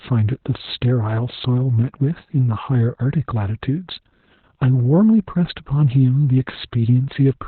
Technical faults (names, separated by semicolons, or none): Opus voice compression